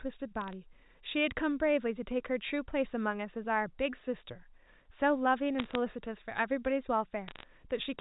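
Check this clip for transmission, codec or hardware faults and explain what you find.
Three short bursts of crackle break through the speech, at 0.41 to 0.53 s, 5.59 to 5.75 s and 7.28 to 7.44 s. These are bit errors on a digital phone line. Each burst is a cluster of sharp ticks over the unchanged speech. On this band-limited telephone line, heard as G.711 A-law coding, flipped bits corrupt single samples. When a sign or high-order bit is hit, the sample jumps and makes a tick. The error rate is a few tenths of a percent, and it climbs slightly in the later bursts.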